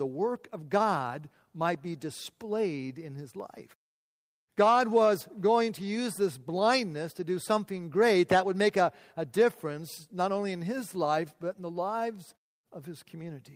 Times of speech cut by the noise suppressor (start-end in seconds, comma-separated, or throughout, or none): none